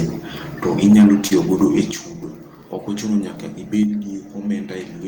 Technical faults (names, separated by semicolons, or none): short concealed packet loss; microphone overload; microphone volume stepped down